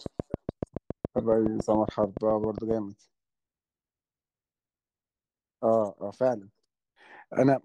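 From 0.06 to 2.72 s a train of clicks ticks over the speech, about 7.2 per second at a steady spacing, some twenty in all, peaking around 10 dB above the speech. They likely come from electrical interference or a faulty connection or power supply. The waveform shows evenly spaced spikes; the spectrogram shows thin vertical lines across all frequencies.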